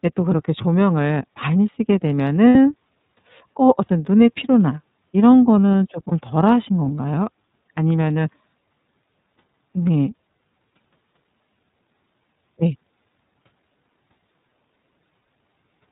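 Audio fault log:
Throughout: iLBC codec. Narrowband speech is cut off at 4 kHz, with plainly audible roughness fitting 30 ms frames at about 13.3 kbps. The spectrogram is empty above 4 kHz.
2.49–2.55 s, 6.08–6.12 s, 15.20–15.26 s: lost iLBC frames. The decoder repeats the last pitch cycle with noise for 60, 30 and 60 ms, producing held buzzy vowels. The spectrogram shows flat, smeared harmonic bands.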